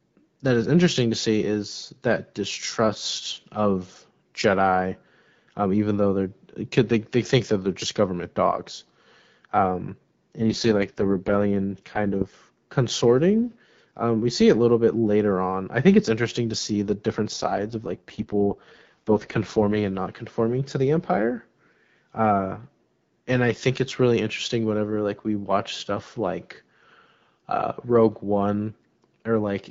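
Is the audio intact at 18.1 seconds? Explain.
No, 18.1 s sits inside an AMR rate drop from about 17.33 to 19.93 s, just after "to see the different". The link forces the codec down to a much lower rate, which fits a step down to 6.6 kbit/s, so there's no gap, but the voice turns raspy and synthetic until "not conforming to the".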